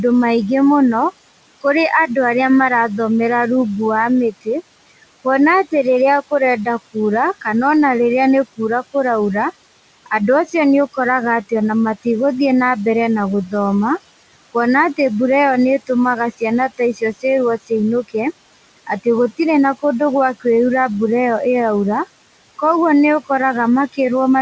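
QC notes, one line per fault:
throughout: noise suppressor artifacts. The steady room noise is pulled down by about 19 dB between phrases and comes back up under the speech, so the residue swells frame to frame.
4.31–4.48 s, 16.69–17.24 s, 17.58–17.71 s: speech cut by the noise suppressor. Stretches of quiet speech were classed as noise and attenuated along with the background, by up to about 20 dB at 4.31 s and about 16 dB in the two later spots, so parts of syllables sound swallowed or faint.
Room noise sits about 16 dB below the speech, and the G.722 call path leaves nothing above 8 kHz, which fits a 64 kbps wideband setting.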